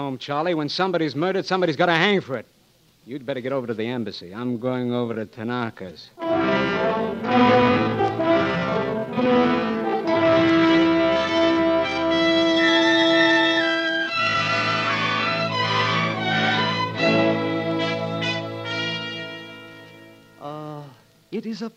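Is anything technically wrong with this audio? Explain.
Yes. From 4.35 to 14.49 s there's a time-stretched section, slowed to about 0.64 times normal speed while the pitch holds steady. It's likely software padding the audio out by repeating short slices, which is why that stretch drags before the pace snaps back.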